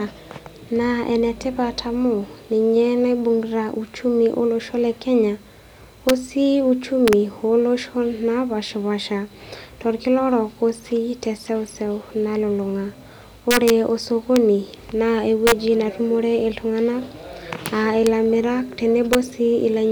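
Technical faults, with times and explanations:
6.09 s, 7.08–7.13 s, 13.51–13.70 s, 14.36 s, 15.47–15.52 s, 17.66 s, 18.07 s and 19.13 s, integer overflow: on loud speech peaks pushing up to about 2 dB past full scale, the integer arithmetic wraps to the opposite sign instead of limiting, so each peak flips across the whole range and cracks far more harshly than clipping.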